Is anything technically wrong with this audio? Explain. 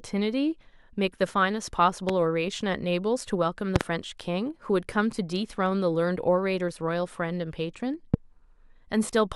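Yes. The speech is hit by loud pops: a single sharp pop from 2.09 to 2.11 s, about 15 dB above the speech; a quick double pop from 3.76 to 3.83 s; and another single pop from 8.14 to 8.16 s, both about 20 dB above it. The speech carries on beneath each one. The likely cause is a brief voltage spike, from a plug, a switch, static discharge or a driver glitch, which the downstream circuitry shapes into a short percussive pulse.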